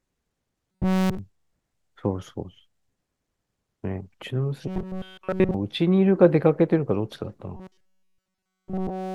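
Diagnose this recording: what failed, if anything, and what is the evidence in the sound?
A rigid, metallic buzz fixed at 188 Hz is imposed on the speech at 0.72–1.19 s, 4.68–5.54 s and from 7.57 s to the end. This is robotic sound from repeated short buffers, likely a driver-buffer underrun: a roughly 5 ms block replays continuously while the real audio is skipped.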